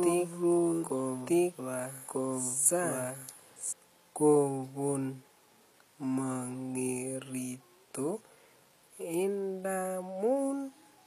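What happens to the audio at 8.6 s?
HE-AAC compression is audible at 8.6 s, as it is across the whole speech clip. The treble is likely rebuilt by spectral band replication, copied up from lower bands, so s sounds turn gritty and lispy, which fits a low bitrate near 24 kbps.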